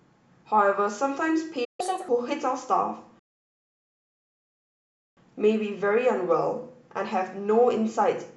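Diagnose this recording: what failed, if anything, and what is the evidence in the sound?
Playback stall at the player stage: the speech drops out at 1.64 s and comes back at 1.80 s, a gap of roughly 0.14 s in mid-flow. That's most likely the output thread getting blocked or briefly starved, so nothing reached the converter until it recovered.

Catch-up at higher speed right after, from 1.80 to 2.09 s: the speech runs at 1.5x, with pitch jumping by around seven semitones, then settles back. The player is resampling its backlog to recover the time it lost in that stall.

Rebuffering stall from 3.19 to 5.17 s: a clean cut to silence for about 2 s, then the speech resumes exactly where it left off with nothing missing. The download ran dry, playback paused until enough data arrived, and the clip just got longer.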